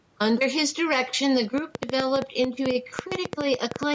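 Right from the start there's gain pumping: the level keeps getting yanked down by a few dB on each loud bit, so loud and soft parts end up closer in level. That's likely input gain set way too hot with a fast limiter clamping it.

From about 1.58 s to the end, a train of clicks kicks in, roughly twenty ticks at around 8.5 a second, unevenly spaced and poking up to about 20 dB over the speech, even in pauses. Likely interference or a faulty connection.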